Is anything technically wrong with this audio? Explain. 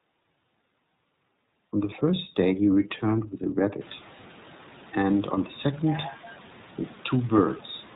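Yes. The speech carries plainly audible iLBC codec damage from start to finish. Each frame's excitation is coded on its own, and the frames sound about 30 ms long, which fits the 13.33 kbps mode. Nothing passes above 4 kHz. The speech sounds muffled, slightly rough and synthetic. The room noise rises by about 24 dB around 4 seconds but stays about 25 dB below the speech. It is part of the recording, not a fault.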